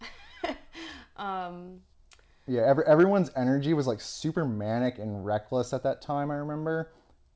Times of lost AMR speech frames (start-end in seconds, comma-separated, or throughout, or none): none